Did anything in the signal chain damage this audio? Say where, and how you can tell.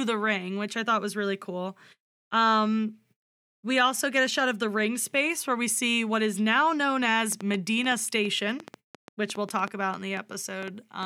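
Yes. A train of clicks starts at 7.32 s, just after "what is now known," and runs to 11.04 s: about twenty similar pops at an irregular 5.7 per second, peaking about 5 dB above the speech. This is likely interference coupling into the analogue wiring.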